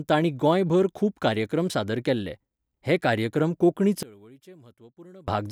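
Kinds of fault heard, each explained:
One channel inverted: From 4.03 s to 5.28 s, right after "केल्ले हे कार्यक्रम कोंकणी", the speech abruptly drops by about 24 dB and turns faint, as if most of the centred voice had been removed. The likely cause is one stereo channel flipped in polarity, so the identical centred speech cancels when the channels sum to mono, leaving only the small difference between left and right.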